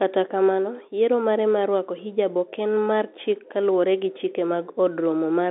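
Nothing is wrong in this speech clip: it carries the narrow band of a landline call, topping out below about 3.7 kHz, just as G.711 telephone coding should.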